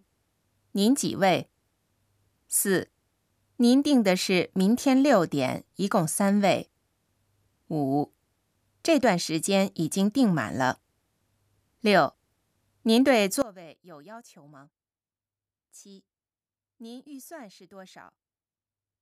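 A speech recording whose level collapses from 13.42 s to the end at 19.01 s, falling by about 23 dB. The likely cause is one channel inverted: with one stereo side in reversed polarity, the shared content cancels when the channels are summed to mono, leaving only their difference. Unlike a dropout or a gain fault, the sound does not stop or simply get quieter; a faint residue of the channel difference remains.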